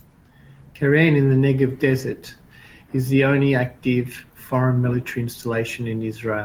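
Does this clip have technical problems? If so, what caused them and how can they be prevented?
No, there are no technical problems to report here.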